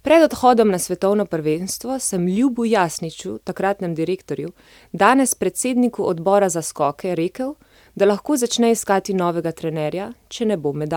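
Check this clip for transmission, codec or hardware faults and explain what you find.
No faults turned up when checking this clip.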